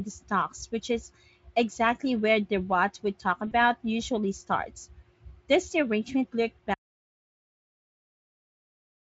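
At 3.47 s the speech breaks for about 40 ms, to 3.53 s. This is VoIP packet loss concealed by the speech codec. The gap fits two lost 20 ms frames. The decoder repeated its last pitch and filter at falling gain. The sound smears into a fading buzzy tone or coloured noise before recovering.

At 6.74 s the audio drops to silence and stays there to the end. This is an audio dropout to silence. The cut is abrupt. No room tone remains, only silence. The input was likely lost, with the recorder still writing.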